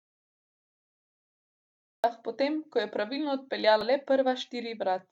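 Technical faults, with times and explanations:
0.00–2.04 s, audio dropout to silence: the clip opens inside a stretch of silence, likely from a lost input while recording continued, unlike a pause, which keeps room tone.
3.81–3.83 s, damaged data in a compressed stream: a brief glitch where the decoder misread corrupted frames and resynchronised.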